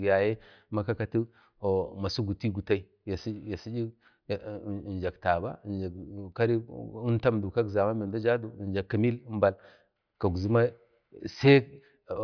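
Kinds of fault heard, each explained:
No technical faults can be heard anywhere in the speech recording.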